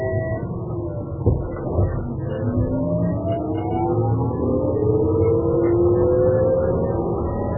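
Throughout the clip, the encoder appears to have been starved of bits, pointing to MP3 compression at a very low bitrate, something around 8 kbps, as the likely cause. With so little data, it discarded everything above about 2.9 kHz and kept only the strongest frequency lines, letting weaker ones drop in and out between frames. The sound is heavily damaged as a result: dull and band-limited, with a watery, swirling texture and smeared, softened attacks.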